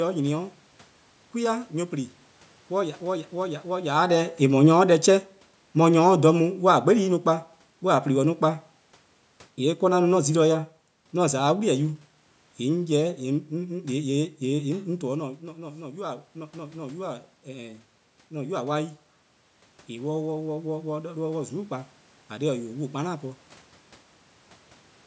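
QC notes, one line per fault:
3.89 to 7.2 s, automatic gain falling: the talker leans in around 4 s, the AGC decides things are too hot and eases its gain down by about 5 dB over roughly three seconds, so the voice and the room noise behind it sink together.
14.71 to 18.6 s, automatic gain rising: around 15 s the talker drops back, about 13 dB quieter at the mic. The AGC slowly pushes about 6 dB back in, so voice and room noise swell up together over nearly four seconds.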